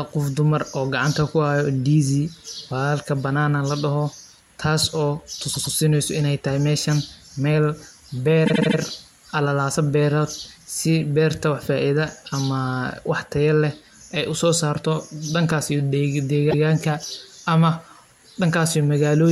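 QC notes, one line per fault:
5.53–5.74 s repeated frames: a stutter as one 104.5 ms slice of speech plays twice more, because a run of compressed frames was duplicated; adds 209 ms.
8.45–8.77 s repeated frames: a longer machine-gun stutter, a 78.4 ms slice replayed four extra times, from duplicated compressed frames; adds 313.5 ms.
16.50–16.63 s repeated frames: a single hiccup as a 130.6 ms slice plays once more, from a resent frame run; adds 130.6 ms.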